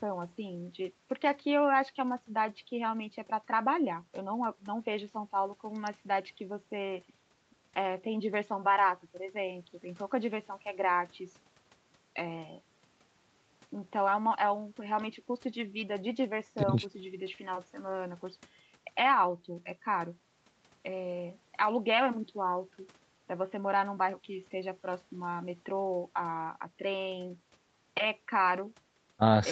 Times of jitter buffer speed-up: none

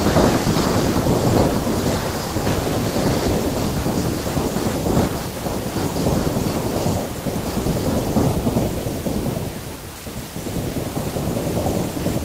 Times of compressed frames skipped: none

